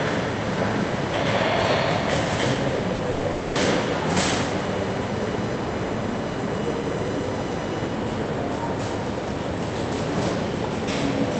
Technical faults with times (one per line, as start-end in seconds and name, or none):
2.95-3.02 short concealed packet loss
3.11-3.26 burst of packet loss
3.31-3.58 long network dropout